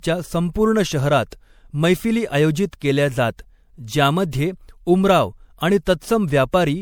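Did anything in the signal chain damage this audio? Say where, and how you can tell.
Yes. The codec stage shows generation loss throughout the speech: a swirly, hollow, smeared texture with blurred attacks, and nothing above 20.7 kHz. This likely comes from repeated MP3 encoding, about three passes on shifting frame grids that fit a 96 kbit/s chain, stacking quantisation noise and spectral holes.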